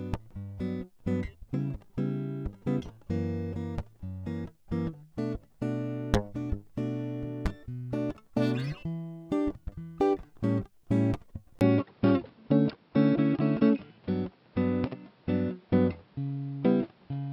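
A music recording that changes character at 11.59 s: after a brief dropout of about 20 ms, everything above 5.5 kHz disappears, so the top end turns dull and boxy through to the end. The level shifts by roughly 5 dB, and a new background noise floor appears about 35 dB under the music. Together these point to an input switched to a poorer device, likely another microphone or a headset's call profile, with its narrower bandwidth and different gain.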